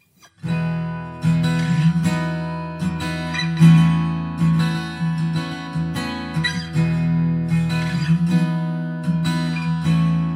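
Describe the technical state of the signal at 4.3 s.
A second, slower capture path likely mixed the audio in twice, creating a doubled audio track from 3.57 to 5.67 s: a dry copy about 150 ms late, roughly 5 dB quieter, starting and stopping abruptly.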